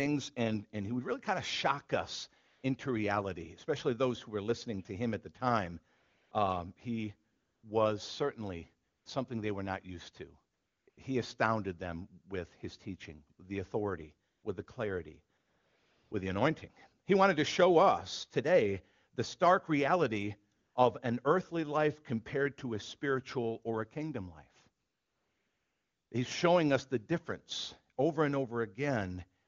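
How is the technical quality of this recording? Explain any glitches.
The recording has a recurring AMR comfort noise fault. Eleven pauses between 2.47 s and 29.43 s, lasting from about 50 ms to 1.28 s (longest 24.83–26.11 s), lose the real background. The encoder judged the talker silent and stopped sending speech frames, so the receiver substitutes smooth, steady synthetic noise that switches in and out. The wideband speech around these gaps sounds clear, which fits a high AMR-WB rate near 23.85 kbit/s.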